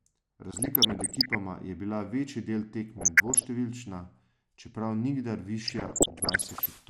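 Throughout the recording the speech has a dull, band-limited quality with a granular, gurgling edge. This is likely MP2 compression, with the upper sub-bands starved of bits and switched off, and the remaining bands coarsely quantised. The damage is plainly audible and fits a low rate of about 80 kbps. Unlike the error bursts, it is steady and present everywhere, a constant coloration rather than sudden events.

DAB burbling breaks in three times: from 0.51 to 1.35 s, from 2.94 to 3.45 s, and from 5.65 to 6.66 s. Bit errors have slipped past the error correction into the MP2 data. Corrupted samples put short blips of noise into single sub-bands, and corrupted scale factors make sub-bands jump in level for up to a frame, giving a burbling disturbance over the speech. The amount of disturbance points to dozens of damaged frames per burst. The last burst is the densest, consistent with an error rate nearer one and a half percent. 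What separates this from plain compression is that it arrives in bursts with erratic, frame-rate flutter, then stops.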